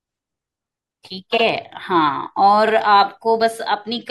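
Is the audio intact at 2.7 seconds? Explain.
No. From 2.67 to 2.71 s there is a repeated-frames fault: a 42.7 ms block of the compressed stream is decoded and played a second time, which fits a run of two codec frames sent or written twice. The speech stutters briefly as that slice repeats, and the clip is 42.7 ms longer for it. A dropout would remove time and leave a gap. Here the same sound is heard twice in a row.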